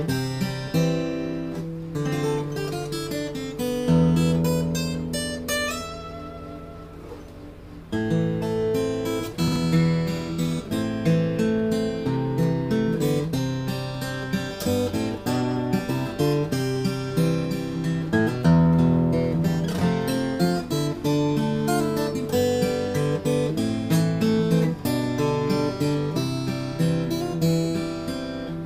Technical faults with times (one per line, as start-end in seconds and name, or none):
9.48-9.56 chunks out of order